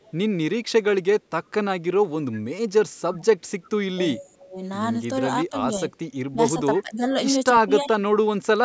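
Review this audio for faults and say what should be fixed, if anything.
Echo leak: the far end's echo canceller likely let residual loudspeaker pickup through, so faint scraps of the voice return 341 ms late at 0.0–0.12, 3.62–3.70, 6.76–6.81 and 7.87–7.93 s, about 35 dB down early and about 25 dB down later. Better echo-path tracking and residual suppression at that end would prevent it.

Speech suppressed in double talk: during overlapping talk the echo canceller likely mistook the local talker for echo and attenuated both, so between 3.12–4.57 and 5.5–8.02 s the voice dips by up to about 15 dB for roughly half a second in each stretch. More reliable double-talk detection would prevent it.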